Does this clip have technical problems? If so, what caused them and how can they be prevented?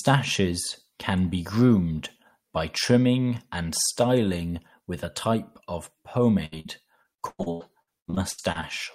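Yes. Two short bursts of packet loss hit at 6.45 to 6.54 s and 6.60 to 6.67 s. Each time, the receiver stretches the last sound and fades it before jumping ahead about 60 ms. A bigger jitter buffer or forward error correction would ride these out.

From 7.03 to 8.65 s, repeated packet loss gives that choppy, robotic sound. There are fourteen holes, the longest about 98 ms, and roughly a third of the stretch is patched guesswork. A steadier network path, or redundancy like FEC on a lossy link, would prevent it.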